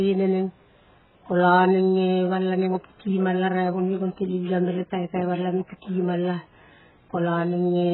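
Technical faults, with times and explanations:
Throughout, AAC compression: nothing above 4 kHz, with heavy warbling smear a clean low-pass lacks, likely from a bitrate near 8 kbps starving the quantiser.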